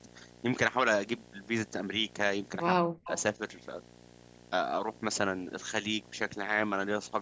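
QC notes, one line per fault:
Throughout, video or display buzz: a steady 60 Hz buzz sits under the speech at about 20 dB below it, with a fizzy hash of harmonics stacked above the fundamental. It comes from a screen or video cable coupling its field-rate signal into the audio path. On a spectrogram it shows as evenly spaced horizontal lines at 60 Hz and its multiples running the full width of the clip, visible even in the pauses. The waveform never drops to a clean baseline.
2.69–3.08 s, speech suppressed in double talk: the talker's level falls steeply, by roughly 40 dB at its deepest, for about 400 ms. The likely cause is an echo canceller that, with both sides talking at once, could not tell near speech from loudspeaker echo and turned everything down. The waveform shows a sudden collapse in the envelope, and on the spectrogram the speech energy fades to faint traces, with the buzz lines still present.
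3.05–3.21 s, echo leak: a faint delayed copy of the speech, about 20 dB down and 181 ms late, comes through as a short scrap. This is likely from a far end on loudspeaker whose echo canceller let part of its microphone pickup pass back. On a spectrogram it shows as a weak repeat of the preceding speech pattern offset by 181 ms. The waveform carries a small extra burst trailing the main envelope. Nothing above 8 kHz appears, consistent with the call's microphone processing.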